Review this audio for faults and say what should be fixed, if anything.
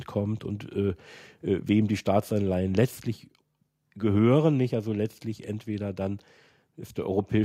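Nothing needs fixing here, since no technical faults turn up anywhere in the recording.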